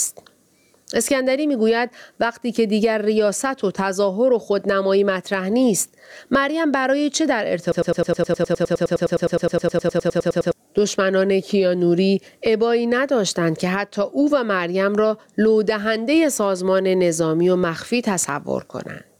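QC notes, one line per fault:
throughout, gain pumping: the gain is pulled down by around 15 dB under each loud syllable, squashing loud and soft parts closer in level. This is likely a fast limiter working against gain set far too high. A noise gate would cut the background to silence instead of breathing.
7.72–10.53 s, broken-record loop: the same 103 ms fragment repeats exactly, back to back, about 27 times while the speech that belongs there is lost. A stalled player or stream likely kept resending its last buffer. A brief stutter would repeat only once or twice.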